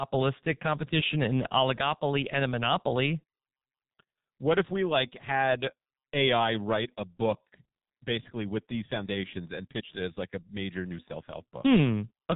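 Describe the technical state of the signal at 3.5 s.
At 3.5 s you're hearing the same heavy G.723.1 codec damage that runs through the whole speech clip. The codec chops the signal into 30 ms frames, throws away everything above 4 kHz, and refreshes its voice model slowly, which fits a low-rate stream of about 6.3 kbit/s. So the speech comes across muffled and hoarse, with consonants smeared together and none of the top-end crispness.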